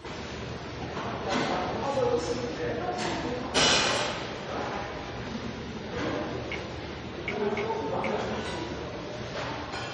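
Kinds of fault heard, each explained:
MP3 compression: a bit-starved encoder, likely MP3 near 48 kbps, cut everything above 10.5 kHz and dropped weak lines, leaving dull, watery sound throughout.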